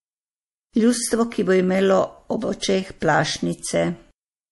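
Speech runs through likely MP3 compression at a starved bitrate, fitting roughly 48 kbps, for the whole clip. The encoder has cut everything above 11.5 kHz and drops weak frequency lines frame to frame, so plainly audible watery, swirling artefacts and dulled treble run throughout.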